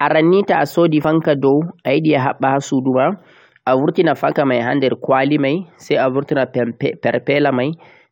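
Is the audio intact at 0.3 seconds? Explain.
Yes, the speech at 0.3 seconds plays through cleanly, with no dropout, click, distortion or other fault at that moment.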